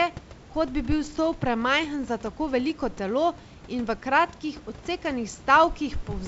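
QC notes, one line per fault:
The speech sits about 21 dB above the room noise, and the band stops near 7.7 kHz, which fits G.722 wideband telephone coding at its full 64 kbit/s rate with only faint traces of the coding.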